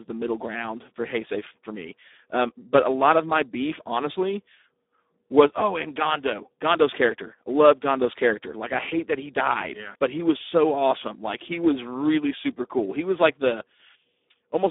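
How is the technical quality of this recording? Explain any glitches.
The technical quality is poor, with heavy Speex codec damage throughout the speech. The encoder had too few bits for the excitation signal, which fits a low setting around 8 kbps. The speech therefore sounds hoarse and noisy. The band is also narrow, roughly 250 Hz to 3.6 kHz, with nothing above 3.8 kHz, so the speech has the thin, muffled character of an old telephone or VoIP line.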